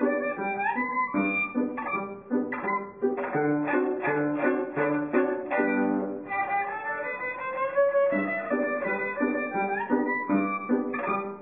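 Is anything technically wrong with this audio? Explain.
No, nothing technically wrong stands out anywhere in this audio.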